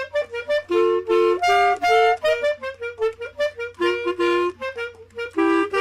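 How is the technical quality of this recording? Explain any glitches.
Nothing here stands out as a glitch; the recording holds steady all the way, with no dropouts, clicks or sudden jumps to point to.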